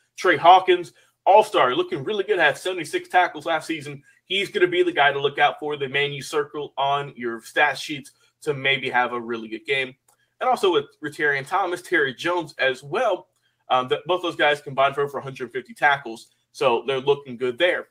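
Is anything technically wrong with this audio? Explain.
No, nothing in this audio stood out as technically wrong on listening.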